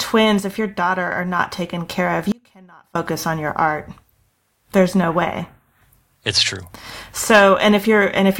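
At 0.40 s the speech and its background noise drop together by about 4 dB in a single step, then return at 1.39 s. This sudden gain jump is likely a digital gain change applied between adjacent samples with no ramp, so the level shifts abruptly rather than smoothly.

From 2.32 s to 2.95 s, roughly 0.63 s, the speech cuts out abruptly, leaving only a faint trace of the signal around 30 dB below its normal level. This audio dropout to a faint residue likely reflects the wanted signal being lost while the downstream path stayed live.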